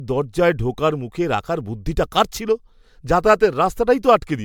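Speech throughout with generation loss: a swirly, hollow, smeared character and softened consonant attacks, more degraded than the wide bandwidth reaching 20 kHz would suggest. Likely cause is repeated MP3 re-encoding, roughly seven passes at a rate consistent with about 136 kbit/s, each adding fresh quantisation damage.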